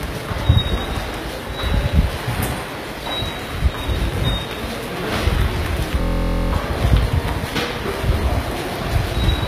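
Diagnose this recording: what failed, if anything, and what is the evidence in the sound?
Codec stage: the treble sounds gritty and metallic, with highs that do not sit naturally on the lower content, and nothing above 14.9 kHz. This is likely HE-AAC compression at a low bitrate near 20 kbps, rebuilding the upper band from copied lower bands. A spectrogram would show repeated, blocky texture above the crossover and a hard ceiling at 14.9 kHz.

Driver or buffer stage: from 6.01 to 6.53 s a system hang loop gives a steady buzz at 43.1 Hz. One 23.22 ms slice repeats 22 times, which fits a 1024-sample buffer the hardware kept replaying while the driver stalled. The waveform would show identical copies of that slice, tiled end to end.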